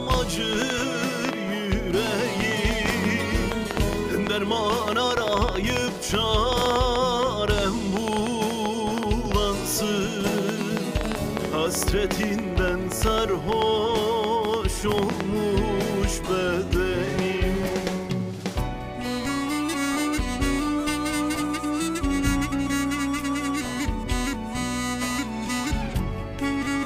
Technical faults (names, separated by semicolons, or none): train of clicks